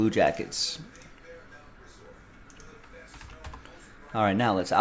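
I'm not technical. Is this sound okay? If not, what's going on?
Yes, it's fine; nothing here sounds wrong or broken.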